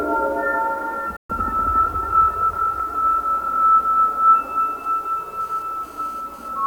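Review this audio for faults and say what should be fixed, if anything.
At 1.16 s the sound cuts almost instantly to silence, with a fade of only about 3 ms, and returns at 1.30 s. This is a digital broadcast dropout: the receiver muted when frames failed. The roughly 128 ms lost fits four missing frames. Better reception or antenna placement would prevent it.

From 4.84 s to 6.48 s a hard, raspy 217 Hz buzz with many harmonics comes and goes, about 31 dB below the signal. This is GSM phone buzz: a nearby 2G phone's data bursts are being rectified by the audio circuitry. Keeping phones away from the equipment, or using shielded cabling, would prevent it.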